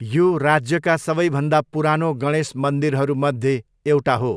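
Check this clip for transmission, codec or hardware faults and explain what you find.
No transmission, codec or hardware faults.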